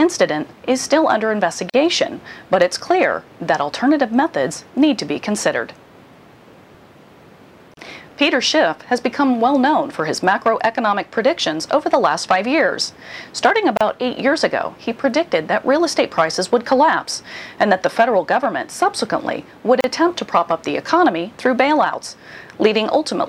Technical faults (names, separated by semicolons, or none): gap at a join of encoded pieces